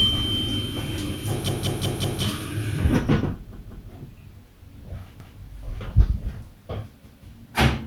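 At 1.49 s, 3.53 s, 5.20 s and 7.06 s, a repeated buffer occurs. New audio arrived late, so the same piece of about 186 ms, which fits an 8192-sample buffer, replays with hard joins. It plays four, two, one and one extra times.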